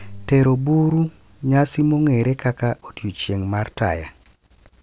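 Speech recording with no technical fault audible anywhere in it. Nothing in the audio calls for a timestamp or a cause.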